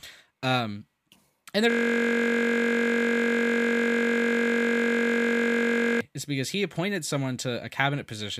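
System hang loop from 1.70 to 6.01 s: the speech freezes on a 21.33 ms fragment, which fits a 1024-sample buffer, replayed some 200 times as the hardware kept cycling its ring buffer. It sounds like a steady 46.9 Hz buzz until "is because he appointed".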